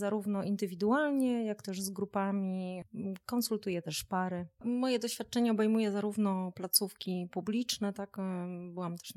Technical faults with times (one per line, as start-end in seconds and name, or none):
none